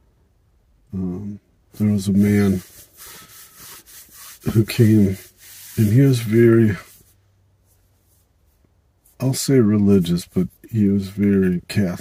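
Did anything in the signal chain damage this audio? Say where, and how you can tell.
No, nothing in the signal chain damaged this audio.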